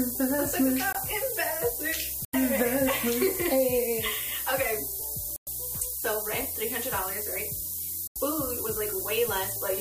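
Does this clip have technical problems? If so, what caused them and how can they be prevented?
Yes. The low bit depth with noise shaping runs through the whole clip: the audio sits at what sounds like only 4 bits, and the rounding error is pushed upward, so there's a steady, thin hiss climbing toward the top of the band, nearly as loud as the sound itself. Keep processing and export at 16 bits or higher.

The corrupt frame muted dropouts come at 0.93 s (about 0.04 s), 2.25 s (about 0.10 s), 5.36 s (about 0.12 s) and 8.07 s (about 0.10 s). Damaged compressed frames were rejected by the decoder and replaced with silence, so each hole cuts in abruptly while timing stays intact. Check transfers with checksums and re-fetch any file that fails.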